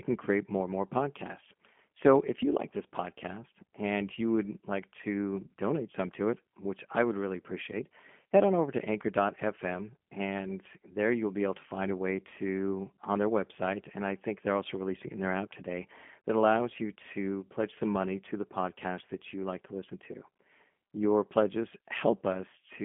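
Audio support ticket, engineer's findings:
G.729 codec damage, whole clip. Speech band-limited to roughly 200 Hz–3.4 kHz, nothing above 3.5 kHz. Rough, synthetic texture from frame-based vocal tract and pitch modelling with sparse pulse excitation. Consistent with G.729A at 8 kbit/s on the call path.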